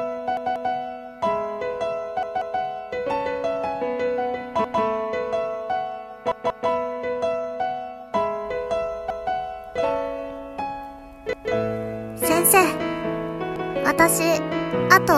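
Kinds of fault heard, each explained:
Repeated buffer: when fresh audio failed to arrive, the output replayed its last block, about 186 ms, which fits an 8192-sample buffer. Seven stutters occur, at 0.37, 2.23, 4.64, 6.32, 9.10, 11.33 and 13.56 s, each segment heard two or three times with hard joins.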